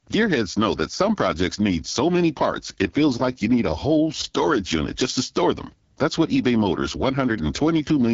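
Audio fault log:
throughout, AMR wideband (HD Voice) codec: rough, raspy speech with nothing above 7.6 kHz, which fits the low-bitrate 8.85 kbit/s mode starving the vocal-tract model.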